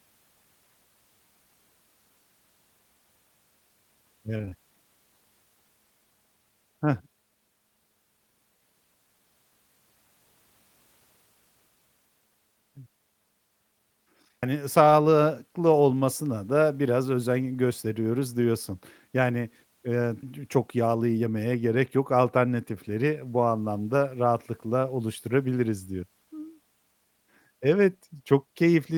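Around 4.37 to 4.56 s there's a short burst of repeated packet loss, and you get that robotic, choppy texture. Four gaps land inside that fifth of a second, none longer than 28 ms, and each one gets papered over by stretching the sound just before it. About half the stretch ends up being patched rather than real speech, 84 ms of fill in all, which is why it sounds choppy and robotic instead of just dropping out.

Then there are two skips, one at 14.43 s right before "sağlıklı olmasına da biraz" and one at 26.03 s just after "bu anlamda rahatlıkla oluşturabiliriz". Each jumps straight over something like a fifth of a second with no silence, so the speech lurches forward mid-flow. They fit a six-second chunk size, which points to audio missing between chunks, likely a recorder dropping a bit each time it closes one block and starts the next.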